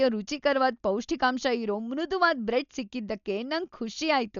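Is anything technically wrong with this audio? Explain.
Yes. Throughout, the speech sounds dull and rough, with nothing above 6.9 kHz and fluttering noise around tones, likely from heavy Dolby Digital compression at a starved bitrate near 48 kbps.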